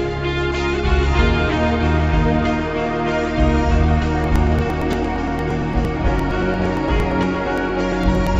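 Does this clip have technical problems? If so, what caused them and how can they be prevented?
Yes. From 4.24 s to 8.27 s, periodic USB or driver dropouts skip roughly 10 ms of the music every 0.115 s, producing about forty evenly spaced ticks. Unlike random packet loss, they keep a fixed rhythm. Stopping the background task that stalls the USB bus or driver prevents them.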